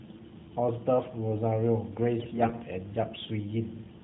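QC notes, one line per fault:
2.20 to 2.62 s, AMR bit errors: for about 0.42 s the speech turns hoarse, scratchy and gargly while pitch and level hold roughly steady. The span fits some twenty 20 ms codec frames hit by around one flipped bit in twenty. The weakly protected bits get through corrupted. Excitation pulses land in the wrong places, and fine pitch, gain and spectral values drift. The narrowband AMR coding around this span sounds only lightly affected.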